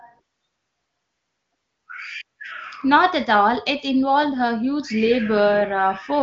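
No technical faults are audible.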